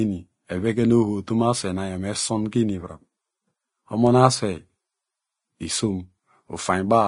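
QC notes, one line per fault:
throughout, Vorbis compression: no content above 10.6 kHz, treble turned to grainy hiss, softened attacks; likely coarse Vorbis quantisation, consistent with around 29 kbps.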